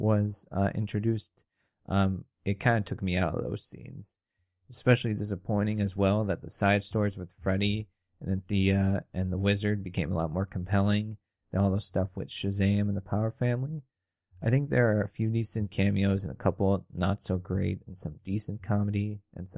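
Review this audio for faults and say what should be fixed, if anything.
No faults can be heard anywhere in this audio, so nothing needs fixing. It can be left as it is.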